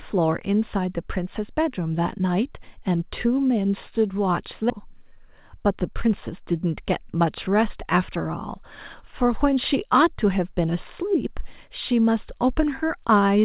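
At 4.70 s the speech jumps abruptly forward, with no gap or fill, as if about seven tenths of a second were missing. This is a skip ahead: a stretch of audio was discarded while later audio was already queued, and playback spliced the two sides almost directly.

From 4.79 to 6.31 s the speech sounds slightly hurried, running about 6% fast with its pitch unchanged. This is a jitter buffer speed-up: to shed excess delay, the receiver repeatedly trimmed short pitch-period slices, removing roughly a tenth of a second in total. The G.711 A-law call path keeps everything below 4 kHz throughout.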